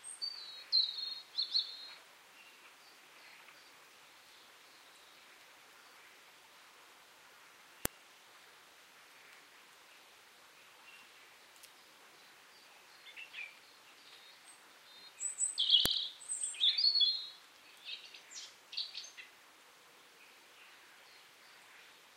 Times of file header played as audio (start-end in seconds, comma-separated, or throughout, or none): 7.85, 15.86